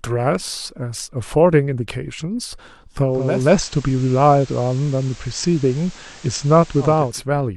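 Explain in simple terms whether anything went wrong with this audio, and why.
From 3.05 to 7.25 s, digital radio blending to analogue: the receiver cross-fades over about half a second to FM, adding hiss.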